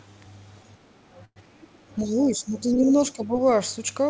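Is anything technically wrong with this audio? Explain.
Yes, three kinds of fault are audible in this speech, carried over a band-limited call path with nothing above 8 kHz, which fits a G.722 wideband codec.

Call audio freeze, 1.25 to 1.39 s: the last sound is stretched into a fading buzz, then about 50 ms of silence. Speech resumes exactly where it stopped, with nothing skipped, which sets it apart from a dropout. The likely cause is delayed packets draining the jitter buffer.

Other side's voice leaking through, 1.90 to 1.96 s: a very faint scrap of a second voice sits well below the main talker. It is added sound rather than a dip, most likely echo the canceller failed to remove.

Speech suppressed in double talk, 2.02 to 2.95 s and 3.12 to 3.36 s: the talker's own voice ducks by around 10 dB in patches, unlike leakage, which adds a voice. The likely cause is an echo canceller confused by simultaneous talk.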